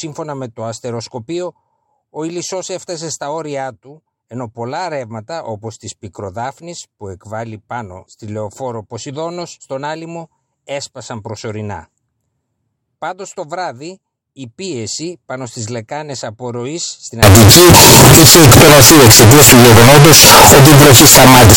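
From 17.23 s to the end at 21.57 s, the speech turns into very loud, harsh distortion, with quiet stretches as loud as everything else. That points to signed and unsigned mixed up, likely 16-bit samples read with the top bit flipped. Ordinary clipping only flattens peaks, but here every zero crossing becomes a full-range jump.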